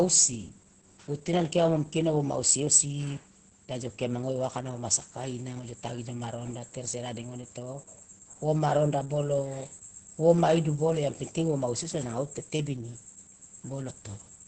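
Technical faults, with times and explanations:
Throughout, Opus voice compression: heavy SILK coding around 10 kbps leaves wideband speech hoarse and robotic with nothing above 8.7 kHz, unlike simple low-pass muffling.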